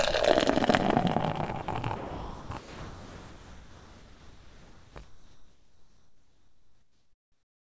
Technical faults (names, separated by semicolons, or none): sound dropped by the voice detector; comfort noise in place of the background